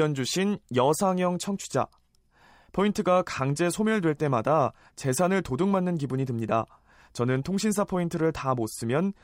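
No technical faults are audible.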